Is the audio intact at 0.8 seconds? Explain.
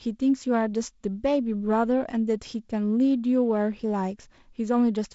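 Yes, the speech is intact at 0.8 seconds, with no fault at that moment.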